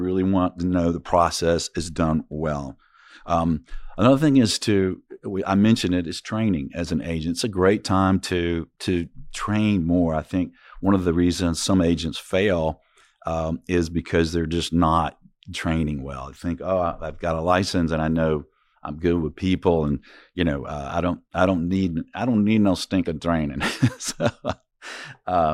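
No audible technical faults turn up anywhere in this speech recording.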